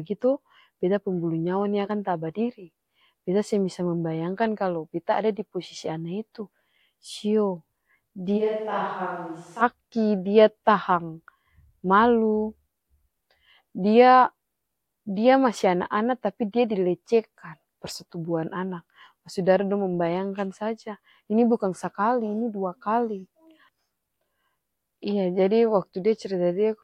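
At 8.39 s the speech suddenly turns roomy and hollow, with thinner bass. Level falls roughly 10 dB. Room noise rises to about 35 dB below the voice. This is a switch to a distant microphone, likely after the close one dropped out. It snaps back at 9.60 s.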